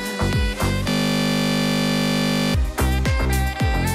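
A system hang loop runs from 0.90 to 2.54 s. The playback system stopped supplying new audio while the sound hardware kept replaying whatever sat in its ring buffer, so one 20 ms slice of sound repeats exactly, some eighty times in a row. Because the slice is so short, the repetition fuses into a steady, hard-edged buzz at 50 Hz in place of the audio, cutting off abruptly when normal playback resumes.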